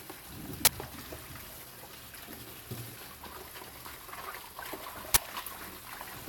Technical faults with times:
0.65-0.67 uninitialised buffer
5.14-5.17 uninitialised buffer

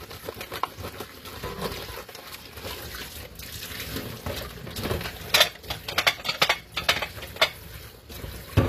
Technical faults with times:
0.00-8.68 HE-AAC compression

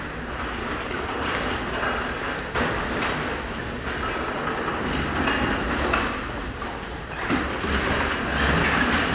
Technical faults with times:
none

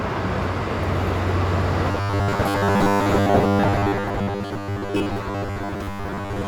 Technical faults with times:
1.91-6.47 robotic sound from repeated short buffers

